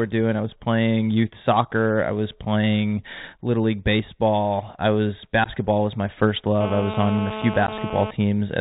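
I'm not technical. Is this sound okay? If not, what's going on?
No. The whole recording has passed through a Bluetooth CVSD headset codec, the basic headset link that cuts everything above about 4 kHz, so speech sounds muffled, s sounds turn scratchy, and a grainy hiss sits underneath.

There are also unconcealed Bluetooth headset packet losses: tiny gaps at 2.31 s, 5.44 to 5.49 s and 7.67 to 7.69 s, where a packet or two went missing and nothing filled the hole. They are abrupt clicks or dropouts, not the smooth fading of a weak signal.

From 6.61 to 8.11 s there is GSM phone buzz, a harsh rasp at 217 Hz from a nearby mobile on a call. It stays steady and pays no attention to the speech, unlike distortion, which follows the speech.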